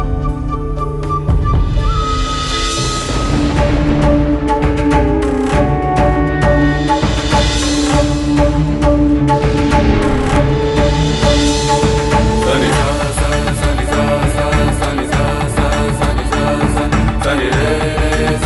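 No technical faults can be heard in the clip, so there is nothing to describe in time order.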